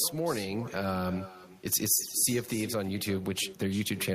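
Throughout the speech, each phrase is followed roughly a third of a second later by a distinct repeat, about 15 dB quieter and thinner than the original. This is echo with no canceller: the far end's loudspeaker feeds its microphone and nothing subtracts that return, so the talker hears their own voice after the network round trip. Unlike room reverberation, which smears continuously into the decay, this is a separate, delayed copy.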